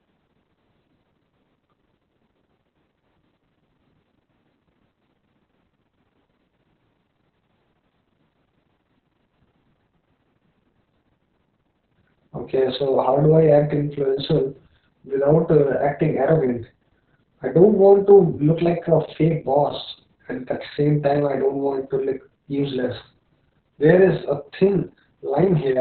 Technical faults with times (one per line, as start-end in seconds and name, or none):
0.00-25.81 Opus voice compression